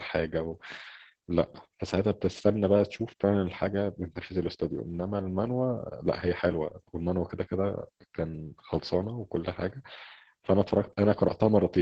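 Across the whole clip, Opus voice compression running its SILK linear-prediction coder at a very low rate, which points to roughly 10 kbps in wideband mode, has stripped the speech heavily. Nothing survives above about 8.9 kHz, so the top end is gone and the voice sounds muffled. The excitation is coded so coarsely that the speech turns hoarse and slightly robotic, with a grainy, synthetic edge running from start to finish.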